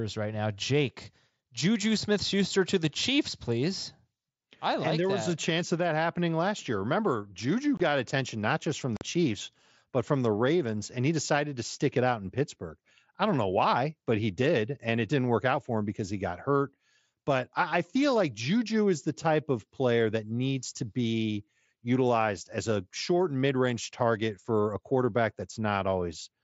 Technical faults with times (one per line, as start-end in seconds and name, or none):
7.77-7.80 unconcealed Bluetooth headset packet loss
8.97-9.02 unconcealed Bluetooth headset packet loss